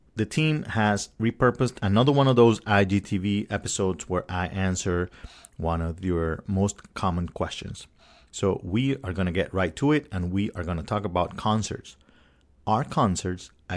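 Nothing in the recording stood out as a technical fault on listening.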